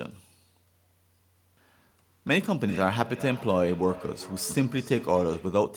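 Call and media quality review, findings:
Feedback echo between two devices, 2.37 to 5.69 s. The speech comes back roughly every 400 ms, thinner and ringier each pass, peaking around -18 dB under the direct speech. Probably a second device in the same room playing the call out loud into an open mic. The local echo canceller only removes its own playback, so the loop gets through. Mute or headset one device.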